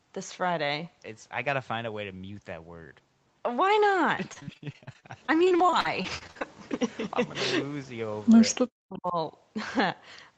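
From 4.33 to 6.43 s there is repeated packet loss (robotic sound): over twenty short gaps, the longest about 46 ms, each patched by stretching the preceding sound. Roughly a quarter of that stretch is concealed, giving a choppy texture with fragments missing.

Between 8.69 and 9.16 s the speech drops very deeply for about half a second. The likely cause is speech suppressed in double talk: the echo canceller, unable to separate the talker from loudspeaker echo while both sides spoke, attenuated the signal. The Opus call path limits the audio to 8 kHz throughout.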